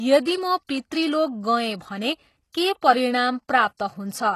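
Throughout the speech the treble sounds synthetic and gritty, with nothing above 12.3 kHz. This is likely HE-AAC compression at a bitrate near 16 kbps, where the upper band is rebuilt from copied lower bands, so sibilants turn lispy and metallic.

Pre-echo appears at 0.66–0.69 s, at 2.81 s just after "गएँ भने के", at 3.48 s, and at 3.77–3.80 s. Codec noise spreads 10 to 29 ms ahead of sharp onsets, leaving a brief hiss before each attack and softening it.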